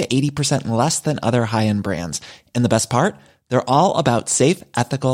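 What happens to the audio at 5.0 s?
At 5.0 s the speech carries on intact, with no dropout, click, distortion or other fault at that moment.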